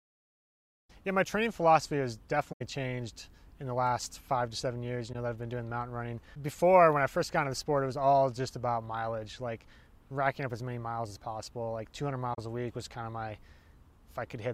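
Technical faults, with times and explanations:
2.52–2.62 s, 5.13–5.15 s and 12.33–12.39 s: AAC frame loss with muting. Three short holes of about 85 ms, 21 ms and 43 ms, which fit the loss of four, one and two AAC frames of roughly 21 ms each. The decoder zeroed the missing frames' spectrum, and the overlapping transform windows fade the sound out and back in rather than cutting it. That softer fade, instead of the abrupt edges of a buffer dropout, and the silence, rather than repeated or smeared sound from concealment, mark these gaps.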